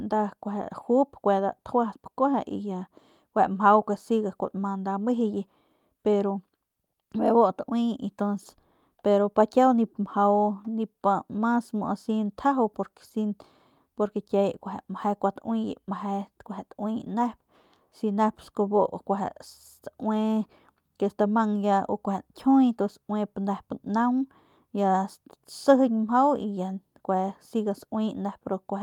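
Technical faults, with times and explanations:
Nothing stood out as a technical fault on listening to this speech recording.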